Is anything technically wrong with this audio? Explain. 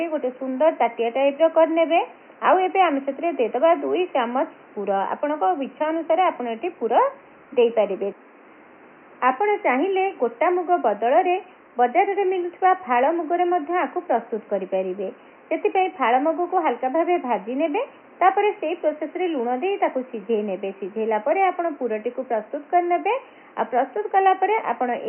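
No, nothing stood out as technically wrong on listening.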